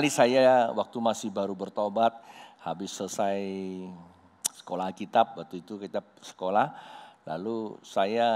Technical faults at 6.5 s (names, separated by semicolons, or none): none